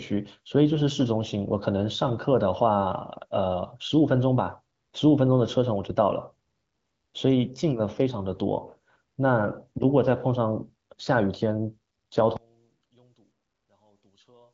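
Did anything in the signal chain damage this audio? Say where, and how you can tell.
Yes. One channel inverted, likely in analogue wiring: from 12.37 s to the end, speech falls about 37 dB to a faint residue as mono summing cancels it.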